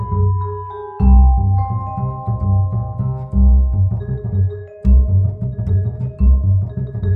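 A music clip with a time-stretched section from 3.72 s to the end, where the pace jumps to about 1.73 times speed and turns rushed while the pitch stays put, likely from software squeezing the audio by dropping short pieces. A plain speed-up would raise the pitch.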